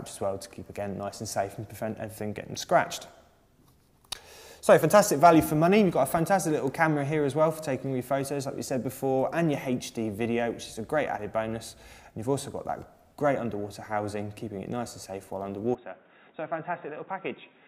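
At 15.75 s the sound abruptly goes dull and boxy, with a drop of roughly 10 dB and a different noise floor, roughly 30 dB below the signal, all with no gap. That's likely the input switched to a poorer device, holding to the end.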